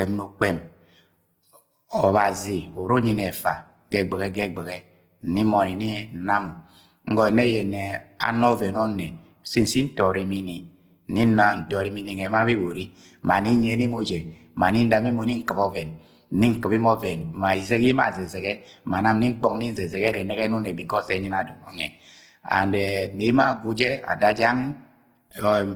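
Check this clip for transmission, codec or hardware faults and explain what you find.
One codec fault runs through the whole clip of speech: low-bitrate audio saved at a high bitrate. The file behaves like a high-quality MP3, with a cut-off at 20.2 kHz, yet the speech carries the smeared, watery texture of a very low-bitrate encoding, which points to something like a 16 kbit/s Opus stage. The likely cause is that this earlier encode was re-saved as MP3 at around 192 kbit/s, which preserved its damage without restoring the discarded detail. Unlike a plain low-bitrate file, the container's bitrate and cut-off look healthy while the artefacts remain.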